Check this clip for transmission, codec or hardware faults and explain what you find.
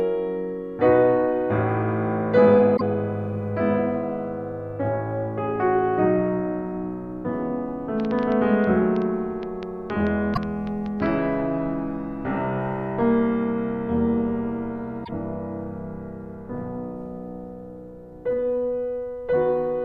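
Two kinds of fault are audible in the music: damaged compressed data at three points, and a train of clicks in the middle section.

Damaged data in a compressed stream occurs at 2.73 to 2.82 s, 10.33 to 10.38 s and 15.01 to 15.09 s. Corrupted bytes cause the decoder to misread frames and lose sync until it finds the next valid header. Each instance is a brief chirp, squawk, click or short hole cutting through the music.

A train of clicks runs from 8.0 to 11.07 s: about twenty similar pulses at roughly six per second, unevenly spaced, peaking about 5 dB above the music. The likely cause is interference or a struggling interface injecting repeated pulses, heard as irregular ticking over the sound.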